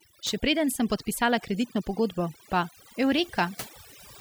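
Overdone noise removal runs throughout the speech. A noise reducer set far too strong pulls individual frequency bands down or out whenever they sit near its noise estimate, taking quiet parts of the voice too. The background drops and breaks up into twinkling, warbling specks.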